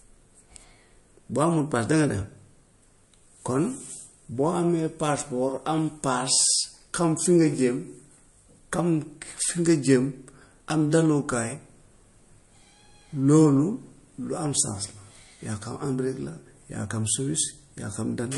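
From start to finish the speech sounds watery and swirly, with s sounds turning chirpy and nothing above 11.3 kHz. This is likely MP3 compression at a low bitrate, which fits about 48 kbps, starving weak frequency lines frame by frame.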